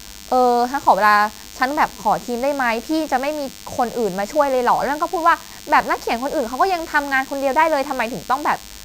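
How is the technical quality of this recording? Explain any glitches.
The recording carries one fault for its whole length: DECT cordless phone buzz. A nearby DECT handset or base transmits a short radio burst every 10 ms, and the audio circuitry rectifies it into a thin, steady 100 Hz buzz, roughly 20 dB below the speech. A spectrogram shows evenly spaced horizontal harmonic lines at 100 Hz intervals running through the whole clip. The waveform shows a regular pulse train under the speech.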